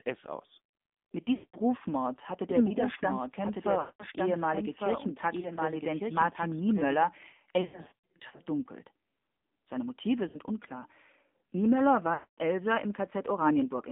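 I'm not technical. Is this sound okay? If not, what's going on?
No. The whole recording has gone through the AMR narrowband mobile codec, the speech coding used on older 2G and 3G phone calls. It keeps only a narrow slice of sound, roughly 200 Hz to 3.6 kHz, so the voice sounds thin and boxed-in. It also rebuilds speech from a simplified model of the throat and mouth, which gives a clearly buzzy, slightly artificial quality.

There are also lost AMR speech frames, short chunks of the call that were damaged in transmission and never arrived intact. The phone filled each gap by stretching the last good sound while fading it down. You hear the voice smear and drop out for about a fifth of a second at 1.34–1.58 s and again at 3.80–4.04 s. A shorter dropout occurs at 10.28–10.39 s, and a longer one at 12.14–12.39 s. Between 5.40 and 5.59 s, and more heavily between 7.62 and 8.41 s, the losses are scattered, so the voice wobbles and stutters. 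Each time the speech returns, it sounds weak or rough for a moment.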